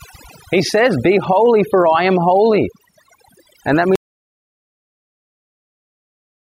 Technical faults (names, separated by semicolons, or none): overdone noise removal; audio dropout to silence